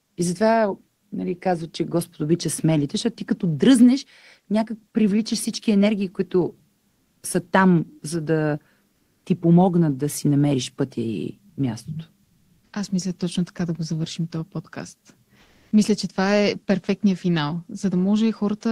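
The sender's voice detector likely stopped transmission during pauses, a pattern that fits Opus discontinuous transmission, leaving the receiver to fill the gaps with comfort noise in place of the background. At 8.95 to 9.25 s, 12.25 to 12.73 s and 15.43 to 15.67 s the real room tone gives way to a smooth, featureless hiss. It sits about 2 dB louder in the first gap, at the same level in the second, and about 3 dB quieter in the third.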